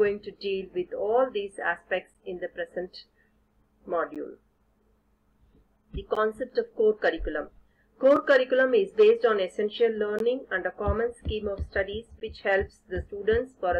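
Six short dropouts break up the sound, at 2.14, 4.15, 6.15, 8.16, 10.19 and 12.20 s, a hard-edged hole roughly every two seconds. That's the classic gap between stream segments: the time stamps on consecutive 2-second chunks don't quite line up, so the player pads the mismatch with silence, anywhere from 4 to 16 ms here. Nothing is actually dropped. Everything after each hole just arrives that much later.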